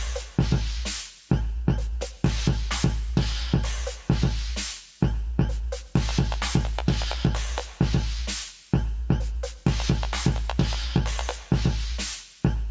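No technical faults are audible in this audio.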